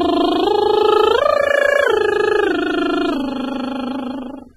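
It's a music clip, and it sounds dull and smeared throughout, with nothing above 13.1 kHz, likely AAC compression at a low bitrate, something like 24 kbps.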